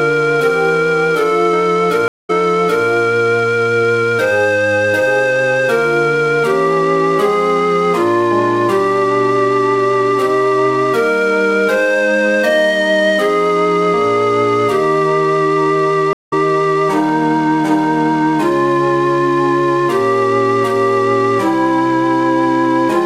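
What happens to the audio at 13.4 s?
Nothing goes wrong at 13.4 s; the audio there plays through cleanly with no dropout, click, distortion or other fault.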